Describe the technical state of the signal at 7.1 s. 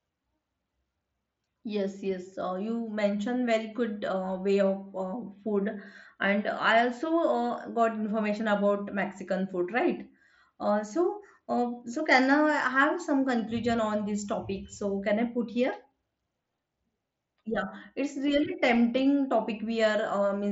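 At 7.1 s the speech comes through intact, carried by the Bluetooth mSBC headset codec as it normally behaves, with no fault at that moment.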